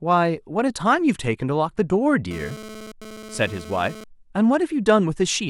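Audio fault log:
2.31–4.04 s GSM phone buzz: a hard, raspy buzz repeating at about 217 Hz, rich in harmonics and sitting about 17 dB below the speech, that comes and goes rather than holding steady, as a nearby 2G phone's data transfer would. The audio circuitry rectifies the phone's radio bursts, turning each pulse into a click. Unlike mains hum, the rate is not a multiple of 50 or 60 Hz, and the tone is gritty, not smooth.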